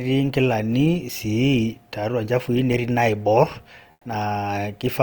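From 3.91 to 4.05 s, a 140 ms pause has comfort noise in place of the background: the real room sound, sitting about 38 dB below the loud passages, gives way to a steady, featureless hiss about 4 dB quieter, likely from discontinuous transmission such as Opus DTX.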